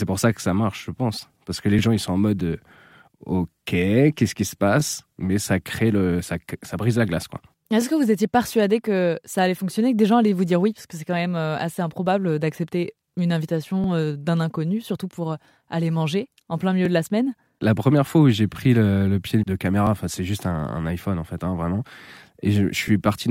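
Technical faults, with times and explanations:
1.79, 4.80, 13.84, 16.85, 19.87 and 22.88 s: overlapping chunks. At each of these joins, about 13 ms of speech plays twice. Each new chunk starts slightly before the previous one ended. The joins fall on a 3-second grid, so the small stutter-clicks recur at that interval. The first comes after "que les", the second after "qui se", and the fourth between "manger en plein milieu" and "de la semaine".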